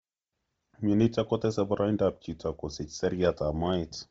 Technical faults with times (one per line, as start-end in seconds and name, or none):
0.00-4.11 Bluetooth LC3 compression